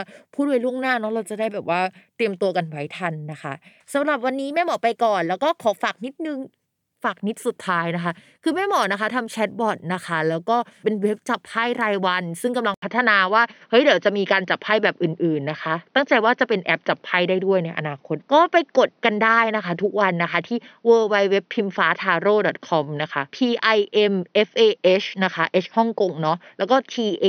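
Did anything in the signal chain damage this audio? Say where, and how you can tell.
Yes. From 12.74 s to the end, after an 80 ms gap, the speech turns dull and boxy, with nothing above 6.1 kHz, a level jump of a few decibels and a faint new noise floor. This is likely the input switched to a poorer device, a narrower-band microphone taking over.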